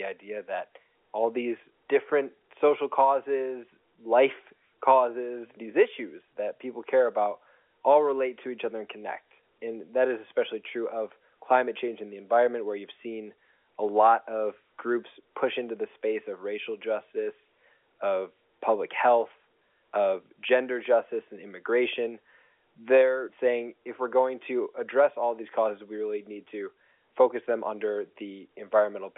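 No technical faults are audible.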